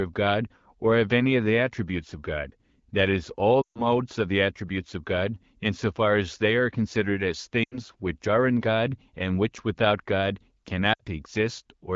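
Brief smeared, fading dropouts at 3.62 to 3.82 s, 7.63 to 7.80 s and 10.93 to 11.00 s are lost AMR speech frames. The wideband decoder stretches its last good frame, fading it out, before speech returns.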